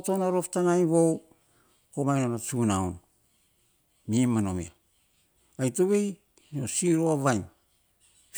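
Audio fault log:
No faults can be heard anywhere in the speech. Nothing in the audio calls for an entry.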